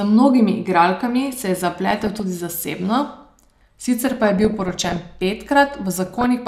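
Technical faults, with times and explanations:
1.91–2.20 s (after "se je"), 4.02–5.00 s, 6.06–6.26 s: DAB burbling. Bit errors of about 1.0, 0.7 and 1.5 percent corrupt MP2 sub-band samples, giving short noise blips in single sub-bands over the speech.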